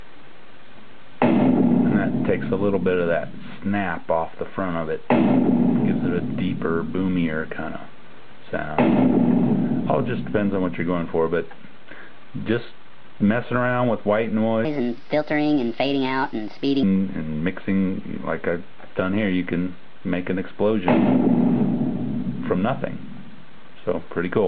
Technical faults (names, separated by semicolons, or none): wrong sample rate